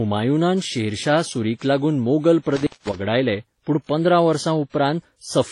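Throughout, the speech sounds smeared and swirly, with several layers of codec artefacts and nothing above 11.3 kHz, likely from transcoding between lossy codecs, each re-encoding the previous damage.

From 2.56 to 2.96 s, the speech cuts out for about 187 ms with crackles at each edge and faint hiss between them. This is an intermittent contact, where a loose connection briefly opens the line.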